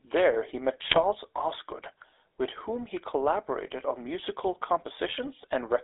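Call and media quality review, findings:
GSM full-rate codec, whole clip: buzzy, gravelly speech, band roughly 300 Hz to 3.6 kHz. Pulse-excited vocal-tract model, sparse excitation. Sounds like 13 kbps GSM full rate.

GSM bit errors, 0.84 to 1.05 s: squawks, pops and gargling. Corrupted filter, pitch or gain parameters warp the spectrum and spike the level, frame by frame.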